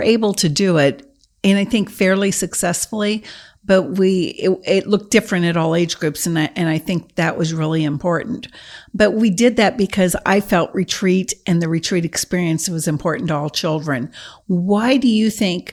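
No technical faults can be heard anywhere in the speech recording. Nothing in it calls for a timestamp or a correction.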